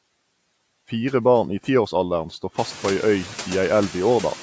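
A speech recording carrying noise suppressor artifacts throughout: the call's suppressor estimates which frequency bands hold steady background noise and pulls them down frame by frame, by about 18 dB. The noise therefore drops away in the gaps between words and swells back up beneath the speech whenever the talker is active. The effect grows more exposed once the room noise climbs by about 15 dB from around two and a half seconds, leaving it only about 18 dB under the speech, while the call's microphone processing keeps everything below 8 kHz.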